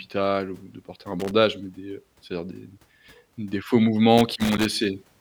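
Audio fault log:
1.20–1.31 s and 4.18–4.66 s, loose connector crackle: irregular bursts of scratchy crackle, the first just after "ou de porter un" and before "mais des", the second, longer, after "des faux". A worn contact keeps making and breaking, chopping the signal, and any DC on the line adds pops. On the waveform there are ragged dropouts and sharp spikes. On the spectrogram, scattered broadband vertical streaks appear over the speech.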